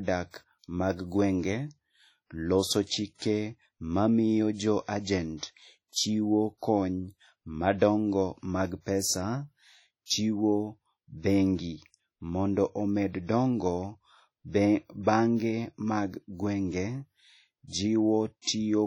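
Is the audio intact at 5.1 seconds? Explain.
No. Just before 5.1 seconds, from 5.01 to 5.07 s, a short hiss creeps in about 55 ms ahead of a sharp attack in the speech, and the attack itself sounds soft and smeared. This is pre-echo: the attack falls late in a transform block, so the quantisation noise sized for the loud onset also fills the quiet moment before it.

Around that moment the speech also has a ringing, washy quality, with a hiss that swells and fades with the signal and nothing above 17.6 kHz. This is heavy codec damage, likely from WMA compression. The long transform blocks smear noise over tens of milliseconds, and the low bitrate zeroes weak spectral detail.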